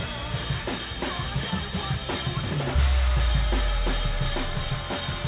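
No faults can be heard anywhere in this recording.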